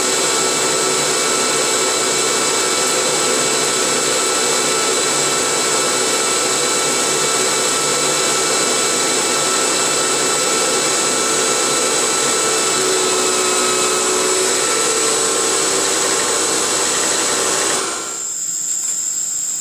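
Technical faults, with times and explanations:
No technical faults are present, so there are no times or explanations to give.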